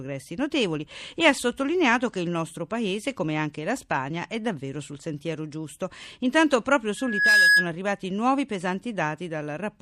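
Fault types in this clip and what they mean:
Loudspeaker feedback squeal: The microphone picks up its own loudspeaker, and the loop runs away at one frequency. A pure tone near 1.7 kHz swells over about a third of a second from 6.97 s. It peaks around 10 dB above the speech and stops at 7.71 s.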